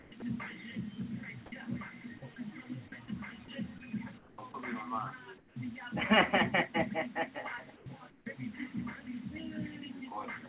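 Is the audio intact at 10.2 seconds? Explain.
Yes, the audio is intact at 10.2 seconds, with nothing breaking up or dropping out at that moment.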